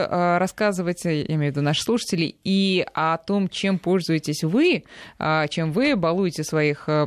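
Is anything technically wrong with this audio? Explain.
No, nothing technically wrong stood out on listening to this speech recording.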